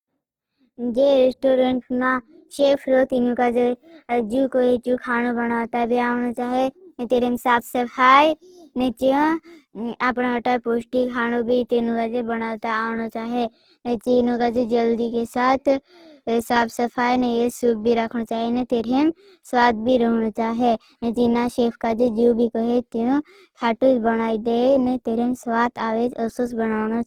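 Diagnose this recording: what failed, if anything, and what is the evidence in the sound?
The codec stage is the weak point: the speech has likely been through Opus compression in its music (CELT) mode at a starved bitrate, which fits roughly 16 kbps. Short of bits, the encoder keeps each band's energy but rebuilds fine detail by folding lower bands or injecting noise, so throughout the clip the voice sounds grainy, rough and noisy rather than swirly. Bandwidth stays full, with content reaching about 20.2 kHz, but the codec damage is plainly audible.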